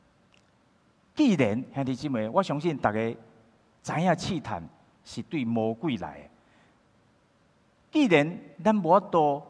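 No technical faults can be heard in the clip, so there are none to describe.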